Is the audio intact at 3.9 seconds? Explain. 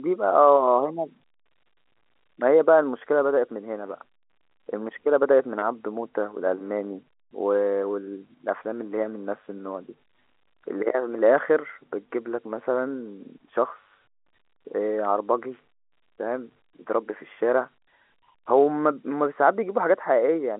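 Yes, the audio is intact at 3.9 seconds, with the speech carried through G.711 telephone coding as normal, band-limited to the usual telephone range with nothing above about 3.9 kHz.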